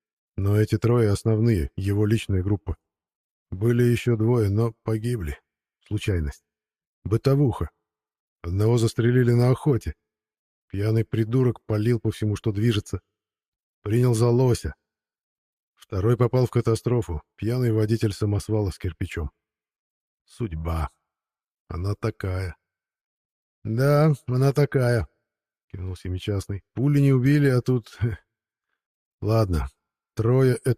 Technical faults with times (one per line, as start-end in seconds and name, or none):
0.00-30.77 clock drift between sender and receiver
0.50-30.37 repeated timing corrections